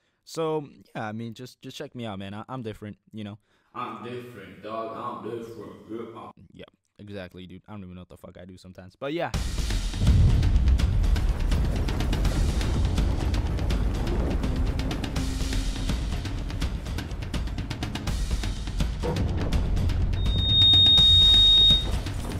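A piercing whistle at about 3.7 kHz swells up from 20.16 s, reaching full strength within roughly half a second and sitting around 10 dB above the rest of the audio until it cuts off at 21.95 s. This is loudspeaker feedback squeal: the microphone was hearing the loudspeaker it drove, and at 3.7 kHz the gain around that loop climbed past unity, so the tone kept feeding itself and growing.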